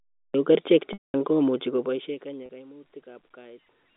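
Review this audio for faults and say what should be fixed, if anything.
The recording began late: speech is already underway at 0.34 s, jumping out of digital silence with no natural attack and a hard onset.

Packet loss with pitch repetition appears twice. At 0.93–1.14 s about 210 ms went missing, likely several consecutive packets, so the repeated pitch period buzzes, fades to silence, then cross-fades back. At 2.46–2.49 s a 30 ms gap gives a brief held, buzzy tone.

Zipper noise runs from 1.63 to 2.72 s. The level drops by about 25 dB in unsmoothed 2 dB steps, roughly ten per second, so a steady ticking rides on the speech as it fades.

To prevent these, start capture before the talker, add jitter buffering or redundancy against lost packets, and ramp gain changes per sample rather than per buffer.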